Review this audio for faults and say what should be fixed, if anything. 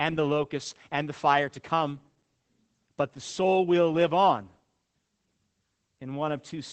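Throughout, the speech sounds muffled, hoarse and faintly robotic, with nothing above about 8 kHz. This is Opus voice compression in its SILK linear-prediction mode. The band is cut to wideband and the excitation is coded coarsely, which fits a low bitrate near 12 kbps. To prevent it, encode at a higher Opus bitrate or work from the uncompressed original.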